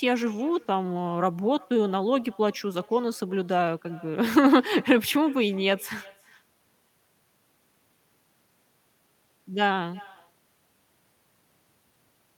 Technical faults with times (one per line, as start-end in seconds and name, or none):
0.00-12.37 echo with no canceller